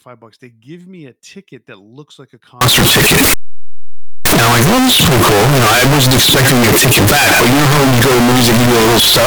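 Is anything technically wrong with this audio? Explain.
Yes. From about 2.61 s to the end, the speech turns into loud, harsh distortion, with quiet stretches blasting as hard as everything else. That's likely signed and unsigned mixed up, probably on 16-bit samples: the top bit flips, so every zero crossing leaps across the full range.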